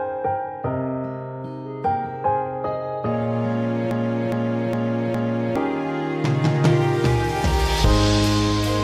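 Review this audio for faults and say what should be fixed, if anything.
A broken-record loop runs from 3.91 s to 5.56 s. A fragment about 0.41 s long plays four times in a row, each copy identical and butted against the next. The sound that belonged in that stretch never arrives. The likely cause is a stall in the player, encoder or stream, which kept resending the last fragment it held until data flowed again. To prevent it, add underrun detection that outputs silence instead of repeating stale audio.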